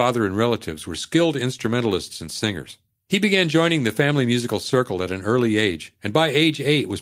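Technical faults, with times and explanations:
No technical faults heard.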